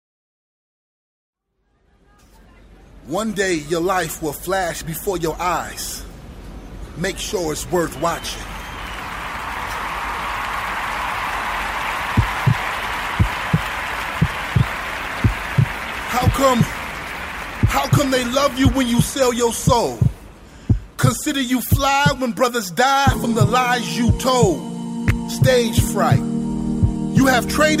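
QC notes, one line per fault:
No faults found in this clip on listening.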